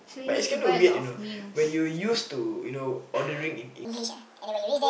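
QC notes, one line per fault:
3.85–4.89 s, section at the wrong speed: From 3.85 s to the end, the speech plays back about 1.72 times too fast. Pitch and pace rise together at once. The voice jumps up by roughly ten semitones and sounds hurried and chipmunk-like. Speed and pitch move as a pair, with no time-stretching, so the samples are being read off too quickly. The likely cause is that this stretch was played or rendered against the wrong clock rate.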